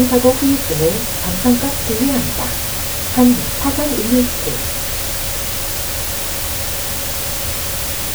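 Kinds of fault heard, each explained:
Low bit depth with dither: The whole clip is squeezed into very few levels, which fits roughly 4-bit resolution, but noise was mixed in before the rounding, so you don't get gritty distortion. Instead, the rounding error turns into a steady, even white hiss that runs from start to finish. It's loud, too, sitting only a few dB below the sound itself, so the hiss nearly swamps what you're meant to hear.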